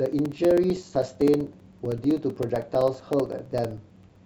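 Regular ticks run through the speech from 0.06 to 4.16 s, one every 64 ms, audible only while sound is present. These are periodic USB or driver dropouts: something blocks the audio path at a fixed interval, leaving gaps of about 4 ms of silence each time.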